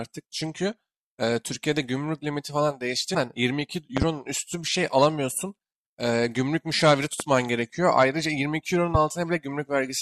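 A loud pop hits at 3.97 to 4.05 s. It is a double pop, two sharp clicks in quick succession. Single pops follow at 7.20 to 7.23 s and at 8.95 to 8.98 s. Each peaks around 15 dB above the speech, which carries on underneath. The likely cause is a sudden voltage step, such as a static discharge or a switch, entering the signal path. The following circuitry shapes each step into a brief, hard thump.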